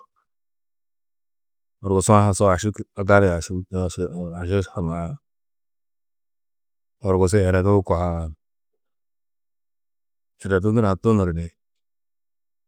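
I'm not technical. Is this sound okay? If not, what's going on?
Yes, I listened to this speech recording and nothing in it stood out as a problem.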